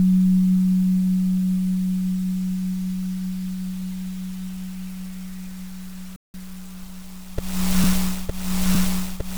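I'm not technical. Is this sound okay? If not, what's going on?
No. At 6.16 seconds the sound cuts out completely and stays silent until about 6.34 seconds, a gap of just under a fifth of a second. Then it picks up again. This is a playback stall. The likely cause is that the player briefly ran out of audio to play, or got held up by something else on the device. It simply stopped producing sound until it caught up.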